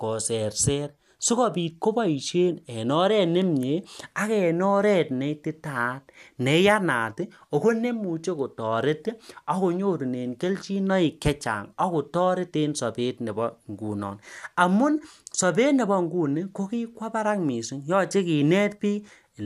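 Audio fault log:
No faults detected in this clip.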